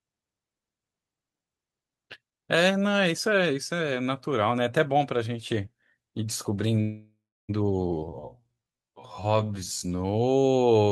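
At 6.81 s the speech stops and a call audio freeze begins, lasting until 7.51 s. The last sound is carried on as a fading buzz, then drops to near silence for about the final 0.32 s of the gap. Packets were likely held up in transit, so the jitter buffer ran dry. When the speech resumes, it picks up exactly where it stopped. Nothing is lost, but everything after arrives about 0.67 s later.

From 7.91 s to the end, a time-stretched section slows the speech to about 0.56 times its normal pace. The pitch does not drop. The change in pace is sudden. This is likely software stretching the audio to fill a set length. It does this by repeating short slices of the sound. Those repeats make the speech drag.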